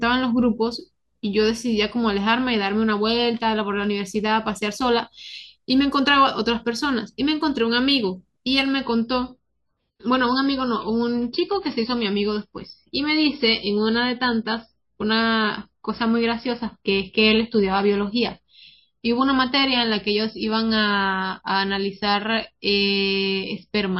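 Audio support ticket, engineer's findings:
Sudden treble loss from 8.83 s through to the end, nothing above 5.6 kHz, swirly codec artefacts up, no gap or dropout. Probable component: adaptive stream player, which switched to a lower bitrate, likely because the connection slowed. The sound fits a jump from about 128 kbit/s MP3 down to roughly 25 kbit/s.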